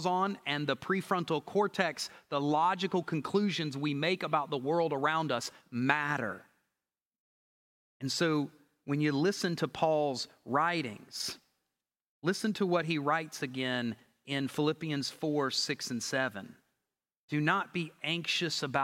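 No technical faults can be heard anywhere in the speech.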